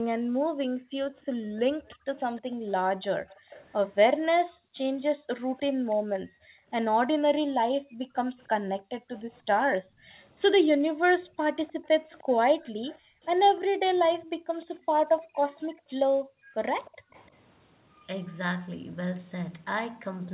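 From 0.0 to 2.67 s, 4.4 to 10.98 s and 12.72 to 17.12 s, the background is gated by the echo canceller. The room sound drops by up to about 40 dB, for about a second, three seconds and two seconds in total, appearing as dark gaps in the spectrogram's noise floor. Overlapping these, from 1.86 to 5.96 s, 8.4 to 9.77 s and 11.68 to 17.29 s, a faint delayed copy trails the speech by about 0.3 s, about 25 to 30 dB down. This is likely an echo leak from a loudspeaker side, visible as weak ghost harmonics offset behind the speech.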